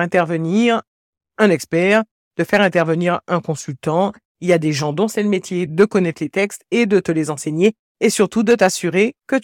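Speech recording, with no technical faults heard anywhere.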